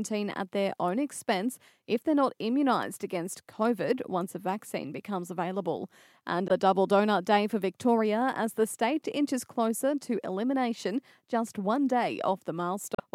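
At 6.47 s, for about 40 ms just before "double donut day for", and again at 12.95 s for about 50 ms, damaged data in the compressed stream makes the decoder misread frames and resynchronise, leaving a brief glitch.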